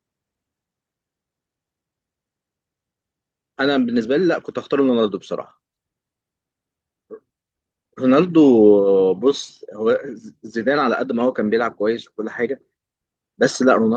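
Nothing in the speech stood out as a technical fault on listening.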